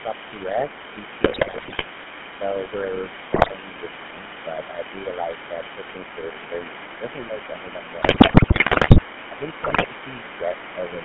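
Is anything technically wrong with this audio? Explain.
Yes. Several faults can be heard.

The GSM full-rate codec affects the whole clip. The sound is confined to roughly 150 Hz to 3.4 kHz, so there is no top end. The character fits the 13 kbps GSM full-rate coder. It models the vocal tract and drives it with a sparse, regularly spaced pulse train. Fine detail in the excitation is thrown away. The result is a plainly audible buzzy, gravelly roughness over the speech.

The other side's voice leaking through is also present from start to end. A second voice sits underneath, about 15 dB below the main talker. The likely cause is the far end playing on the talker's loudspeaker, with the echo canceller failing to remove all of it from the microphone.

GSM bit errors occur at 1.22 to 1.83 s, 3.34 to 3.52 s, 8.02 to 9.03 s and 9.64 to 9.87 s. Corrupted bits reached the decoder. They damaged the filter, pitch and gain values for individual frames. 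The speech breaks into squawks, pops and gargling. The spectrum bends and the level jumps.

Speech suppressed in double talk appears at 6.31 to 6.37 s and again across 9.31 to 10.56 s. The talker's level dips by roughly 5 dB in short pieces. The second stretch is the longer one. The likely cause is both sides talking at once. The echo canceller could not tell the talker from the loudspeaker echo, so it turned everything down. The call microphone processing's bass cut is normal and is not a fault.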